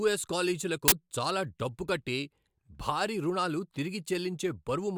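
At 0.88 s, just before "చాలా డబ్బు కట్టి", there's an uninitialised buffer: a 40 ms block got played before any speech was written into it, so stale memory came out as samples. You hear a short, loud burst of harsh digital noise.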